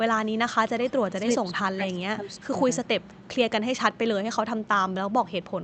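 From 0.85 to 0.92 s there is an echo leak: a faint copy of the speech arriving 363 ms late, about 25 dB below the direct sound. The likely cause is a loudspeaker echo canceller on the far side letting residual pickup through. On a spectrogram it shows as weak harmonic traces repeating the earlier pattern, offset by that delay.

At 1.09 to 1.24 s and again across 1.54 to 2.63 s, speech is suppressed in double talk. The level sags by up to about 20 dB in the first dip and about 15 dB in the second, with roughly 700 ms of the longer span pulled down in patches. This is likely an echo canceller ducking the talker while the other side spoke. The waveform envelope shows notched, uneven dips, and the spectrogram shows the upper bands fading out in pieces.

From 2.84 to 3.28 s the echo leak returns at the same 363 ms delay, now quieter at about 35 dB down. It is again likely residual loudspeaker pickup passed back through the far-side canceller. 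It registers as a faint, smeared shadow of the preceding energy, all beneath the call path's 8 kHz upper band edge.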